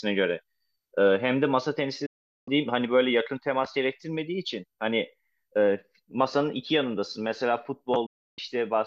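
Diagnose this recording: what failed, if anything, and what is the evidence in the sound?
Digital broadcast dropout at the receiver: failed frames were muted, so the speech fades within 8 ms and vanishes from 2.06 to 2.48 s and 8.06 to 8.39 s.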